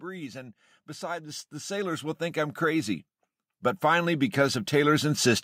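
From 0.05 to 3.09 s, automatic gain rising lifts the level by about 13 dB. The gain control judged the input too quiet and raised it slowly. Speech and background swell together. It happens again from 3.8 to 5.37 s, by about 6 dB.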